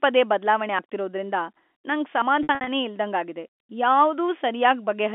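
Right after "ಪದೇ ಬದ್ಲಾವಣೆ" at 0.79 s the speech jumps ahead by about 40 ms. Another jump of about 20 ms comes at 2.22 s. Both are likely dropped buffers (overrun). From 2.43 to 2.67 s, 150 ms of packet loss spread over 240 ms gets patched with pitch repetition: short buzzy holds, and the longest 60 ms gap fades out before the speech cross-fades back. All of this sits in G.711 telephone coding's narrow 250 Hz to 3.5 kHz band.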